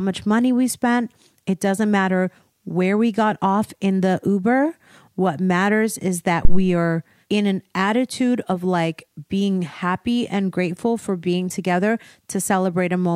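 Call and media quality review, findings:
Deep low thump at 6.45–6.67 s, between "matters is that" and "are in an attitude", peaking near -2 dBFS, decaying in about 49 ms. Phantom power thump: supply switched on or off on live input, DC step through coupling capacitors.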